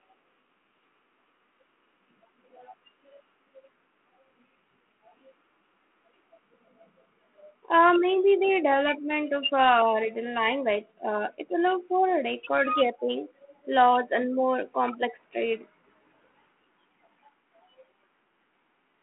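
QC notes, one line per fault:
No faults found on this pass. The speech sits in a telephone band of roughly 200 Hz to 3.4 kHz, with nothing above 3.8 kHz and only light coding texture, as expected from a G.726 ADPCM link at 32 kbit/s.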